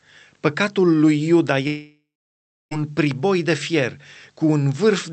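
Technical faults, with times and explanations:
1.67 to 2.73 s, long network dropout: the sound most likely stopped arriving for about 1.04 s. The receiver stretched the last sound into a fading buzz, and for the final 0.66 s or so only silence or a faint steady noise remains. Sound resumes at "priboi de fier" without the missing stretch, so that part is gone rather than delayed. The Opus call path around it limits the audio to about 8 kHz.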